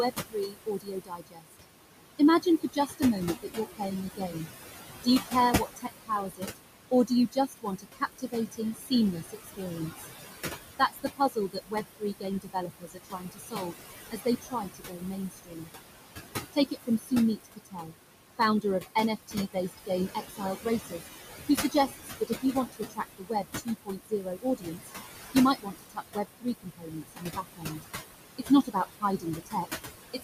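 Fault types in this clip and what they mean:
Noise suppressor artifacts: the suppressor pulls down bands it judges to be steady noise, cutting about 18 dB, so the background pumps between phrases.
Speech cut by the noise suppressor: mistaking speech for noise, it drops parts of the speech by about 18 to 22 dB, leaving consonants and endings swallowed across the clip.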